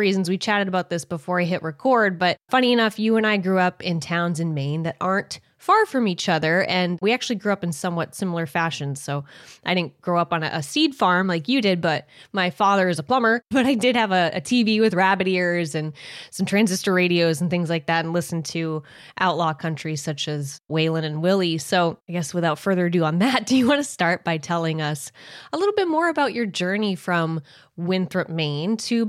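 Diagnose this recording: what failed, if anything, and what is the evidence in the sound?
Nothing in this recording points to a failure at any stage of the chain. The speech carries through with no event that calls for a diagnosis.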